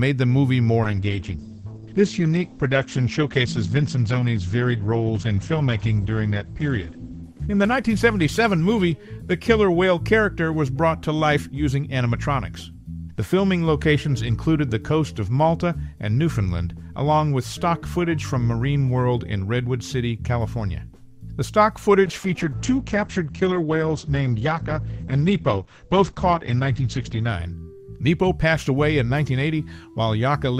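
From 0.84 to 10.31 s, and again from 22.06 to 27.35 s, there's a call bitrate drop. The encoder was starved of bits, so the audio turns rough and muffled with the top end cut off at 8 kHz. That fits roughly 10 kbps, bottoming out for about 5.9 s and 5.2 s.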